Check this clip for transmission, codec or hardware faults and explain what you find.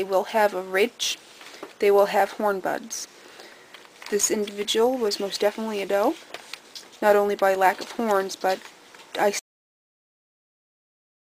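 There is one fault: a cut-off end. At 9.39 s the sound stops abruptly, partway through. It does not fade or decay. It drops straight to digital silence, which lasts for the final two seconds or so. This happens when the last buffers of audio are never written or played out. Whatever was in those buffers is lost. So the sound ends mid-event rather than finishing naturally.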